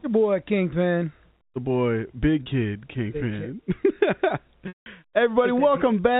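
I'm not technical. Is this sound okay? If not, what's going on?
No. There are two brief glitches in the speech. From 2.43 to 2.46 s, the sound catches for a split second and buzzes, as if held. From 4.68 to 4.86 s, a longer hiccup of 180 ms makes the speech hum briefly, fade to nothing, then slide back in. This is packet loss with pitch repetition. Small pieces of audio went missing in transit, and the receiving end repeated the last bit of sound to cover each gap. The clip has a normal landline-phone sound from G.711 telephone coding.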